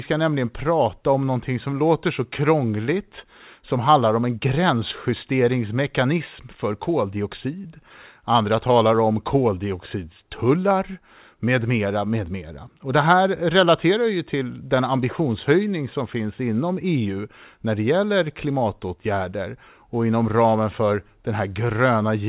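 No technical faults turn up anywhere in this speech recording. It came through a WebRTC call path using G.711 mu-law at 64 kbps, so its content stops at 4 kHz with nothing heard above that.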